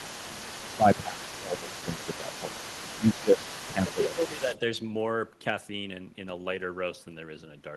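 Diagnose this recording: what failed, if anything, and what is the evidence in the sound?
The failure is in call processing, at the echo canceller. A second voice from the far end leaks through from 0.0 to 4.58 s, sitting roughly 15 dB below the main speech. This is the other side's voice leaking through. The likely cause is that the talker's device played the far end on a loudspeaker and the microphone picked it up. The canceller then failed to subtract all of that echo. The residue stays audible for the first four and a half seconds.

The same stage produces speech suppressed in double talk. The main voice dips while the leaked voice overlaps it. This happens at 0.26 to 0.54 s, 0.77 to 2.57 s, 2.98 to 3.40 s and 3.68 to 4.51 s. The deepest drops are about 15 dB in the first and third spans and about 10 dB in the second and fourth. The likely mechanism is that the canceller could not tell near speech from echo, so it turned both down together.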